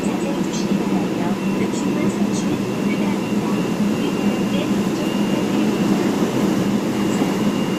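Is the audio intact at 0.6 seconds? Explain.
Yes, at 0.6 seconds the sound plays through intact, with no dropout, click, distortion or other fault.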